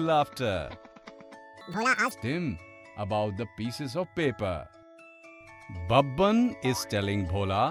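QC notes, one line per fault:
1.61–2.11 s: audio read two samples at a time (double speed). For this half second the samples are taken in pairs as single frames, so the sound runs twice as fast and jumps a full octave, 12 semitones, higher.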